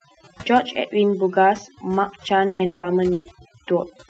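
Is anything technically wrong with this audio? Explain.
Yes, there are three kinds of fault in this speech, heard through a call path using Opus, with the audio bandlimited at about 8 kHz.

Overdone noise removal runs through the whole clip. A noise suppressor set too aggressively pulls individual frequency bands down to nothing whenever they sit near its noise estimate, and it takes the softer parts of the voice along with the noise. The result is a background that drops and breaks up into small twinkling specks.

A burst of packet loss hits twice, at 2.47 to 2.62 s and at 3.13 to 3.37 s. Each time, about 120 ms of audio never arrived in time to play. The receiver covered the hole by extending the last sound and fading it, so a voiced sound stretches into a held buzz and other sounds into a dying hiss. Then the speech picks up further along with that stretch gone. At 3.13 s about 10 ms of extra audio is also added.

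From 2.65 to 2.86 s, just after the first burst, the speech drops out again for about 180 ms. This is likely a longer network dropout. The receiver fills the whole span with a decaying continuation of the last sound rather than going silent. That stretch is lost, and the speech resumes later.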